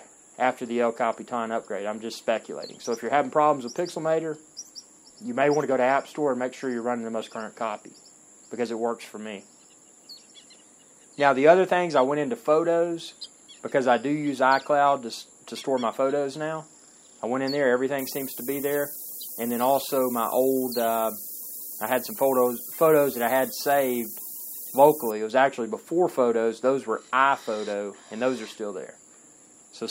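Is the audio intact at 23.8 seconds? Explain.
No, 23.8 s falls inside a stretch of low bit depth with noise shaping from 17.99 to 25.11 s. The audio is cut to 6 bits, and the rounding error is pushed upward, so a thin hiss rising toward the top end sits nearly as loud as the sound itself.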